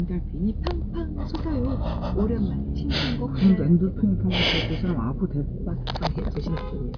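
No technical faults are audible.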